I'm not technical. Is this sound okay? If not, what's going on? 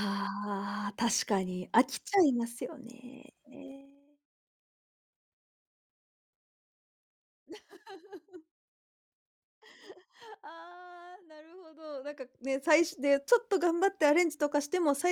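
No. There's zipper noise in this speech. From 3.67 to 4.04 s the volume drops, and from 11.66 to 12.86 s it rises, but in jumps about twenty times a second instead of a smooth fader glide, so each jump ticks, sounding like a zip.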